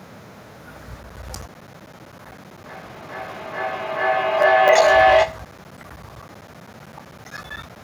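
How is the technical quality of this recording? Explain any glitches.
The technical quality is poor. Two faults overlap through much of the speech.

From 1.03 s to 7.76 s there are periodic USB or driver dropouts. Every 64 ms, a blocked bus or driver loses roughly 10 ms of audio and leaves silence, about a hundred times in all. The ticks are strictly regular, which separates them from random network packet loss.

From 2.66 s to 5.59 s a feedback howl builds as a mic-to-speaker loop gains level on each pass. It narrows to a tone near 700 Hz, with the loop repeating about every 400 ms, and peaks about 11 dB above the speech. The growing level distinguishes it from a steady electrical hum.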